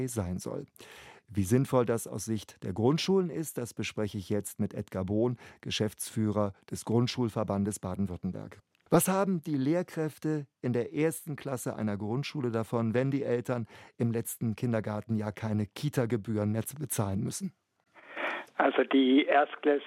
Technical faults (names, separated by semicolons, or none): none